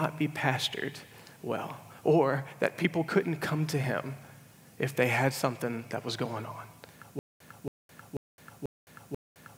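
At 7.19 s the stream likely stalls, and each retry replays the last fragment before running dry: a stutter with silent gaps. A 276 ms burst repeats five times, every 489 ms, separated by 213 ms of digital silence until the end, and the intervening audio is lost.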